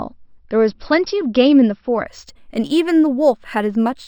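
From 2.07 s to the end, the speech shows imaging from linear upsampling: the rate was raised by straight-line interpolation, which fits a 12 kHz source brought up to 48 kHz. That crude filter dulls the top of the band and leaves faint mirror copies of the spectrum in the 6 to 12 kHz region, roughly 35 dB down, heard as a thin metallic shimmer on sibilants. Unlike aliasing, these tones mirror upward rather than folding down.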